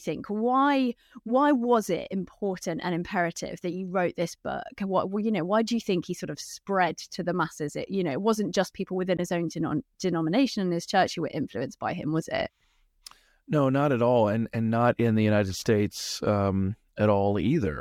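At 9.17 to 9.20 s, right after "wasn't just people within", there's damaged data in the compressed stream: the decoder misreads the frames there and loses sync.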